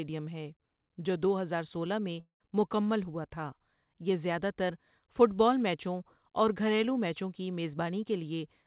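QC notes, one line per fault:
2.20–2.43 s, long network dropout: the audio is replaced by a continuation of the preceding sound that fades to silence for about 110 ms before the signal resumes, roughly 200 ms of material lost. The likely cause is packets missing in transit, with concealment extending the last sound.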